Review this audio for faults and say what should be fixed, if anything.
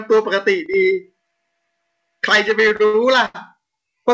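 One channel drops out from 0.66 to 0.74 s. The level falls abruptly by about 6 dB, likely because one stereo channel was lost before the mono sum.

Repeated stalls (stutter) run from 2.48 to 3.36 s. Five late-packet waits, the longest 88 ms, are filled by continuing the last sound, adding about 225 ms of drag without losing any audio.

To prevent these, secure the stereo channel connections and give the jitter buffer enough headroom, or improve network delivery, so packets arrive steadily.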